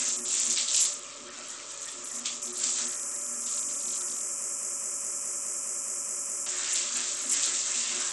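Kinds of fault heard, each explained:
Bluetooth SBC compression: Across the whole clip the treble thins out and flickers in and out, and a gritty grain with aliasing rides on the sound. The damage is heavy, likely from SBC coding with a small bit pool, which fits a low rate around 64 kbps starving the upper sub-bands. On a spectrogram the top bands look patchy and blocky, switching on and off, with step-like edges at sub-band boundaries. The waveform's outline changes little.
broken-record loop: From 4.42 to 6.46 s a single fragment about 0.21 s long repeats exactly, back to back, ten times, giving a stuttering, mechanical pulse before normal sound returns. Whatever should have played in those two seconds is lost, likely because the stream stalled and kept resending the last piece it held. A spectrogram shows the same pattern tiled at 0.21 s intervals. The waveform shows identical blocks.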